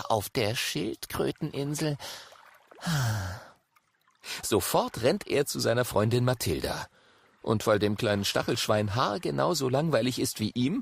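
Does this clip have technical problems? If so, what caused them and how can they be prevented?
No, there are no technical problems to address.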